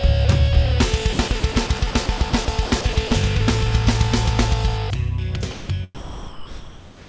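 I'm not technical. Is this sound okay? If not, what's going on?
No, not quite. Between 1.13 and 3.11 s the sound keeps cutting in and out, with about half a second in total swapped for a steady hiss. That's sound chopped by the voice detector: the sending end's voice detector likely kept deciding the audio was just background and briefly stopped sending it.

Later there are two sound dropped by the voice detector moments, likely the same detector giving up on quieter audio. From 5.51 to 5.69 s there's a short patch of filler noise, and from 5.95 s to the very end the sound is replaced by hiss, losing roughly two-thirds of a second of real audio. The call line itself also tops out around 8 kHz, so there's no very high treble.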